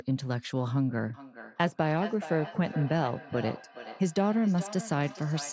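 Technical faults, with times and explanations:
1.14 to 5.52 s, feedback echo between two devices: the speech returns as a thin, ringing repeat roughly every 0.4 s, peaking about 14 dB below the direct sound. A second device in the room plays the call back into this microphone, beyond the reach of its own echo canceller.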